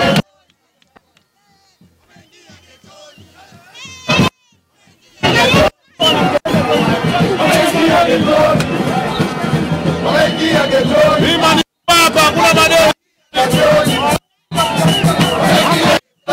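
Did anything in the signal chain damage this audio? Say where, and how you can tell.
No, nothing in the signal chain damaged this audio. No stage from capture through storage to playback left a mark that can be heard anywhere in the clip.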